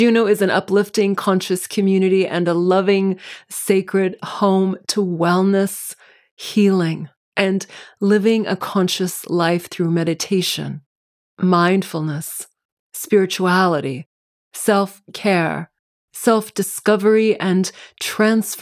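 No technical faults are audible anywhere in the recording.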